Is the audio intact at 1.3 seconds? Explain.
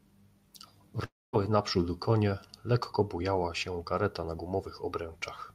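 No. A long network dropout runs from 1.05 to 1.35 s, so 1.3 s falls inside it. The likely cause is a stretch where no audio reached the receiver, which then filled the gap by continuing the last sound as a brief fading buzz or hiss before settling into about 220 ms of silence. Roughly 280 ms of speech is simply lost, and the speech resumes at 1.35 s without it.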